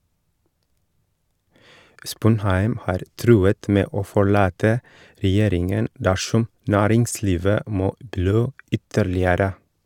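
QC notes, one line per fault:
No technical faults are audible in this speech recording, and the signal holds steady from the first moment to the last.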